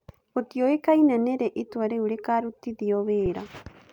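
At 3.26 s, just after "rĩ itua rĩu rĩkarutithio", there is an underrun with a held sample. The output buffer ran dry for about 3.5 ms. During that gap the converter kept outputting its last value, so the waveform sits flat. The speech simply stalls, with almost no click at the start. No audio was lost. Playback picks up where it paused, so the restart is soft too. It sounds like a tiny hiccup in the speech.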